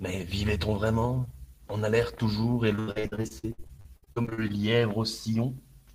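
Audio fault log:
2.75–4.52 s, repeated packet loss (robotic sound): Right after "alerte toujours et", the speech turns choppy and robotic. Over twenty short holes, the longest about 79 ms, are each patched by stretching the previous sound. Roughly 40% of this stretch is filled this way.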